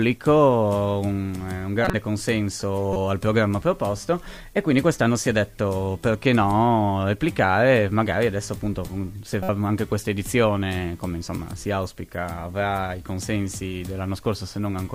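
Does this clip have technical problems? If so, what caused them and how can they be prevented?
Yes. Corrupt frames were decoded at 1.81 to 1.94 s, 2.93 to 2.96 s and 9.42 to 9.49 s. Flipped bits reached the decoder, which played the frames anyway. Energy landed at wrong frequencies, giving brief chirps or noise bursts. Checksums with concealment of failed frames would prevent this.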